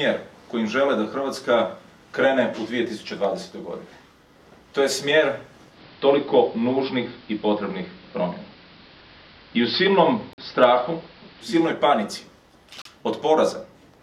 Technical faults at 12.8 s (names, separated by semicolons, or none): block of digital silence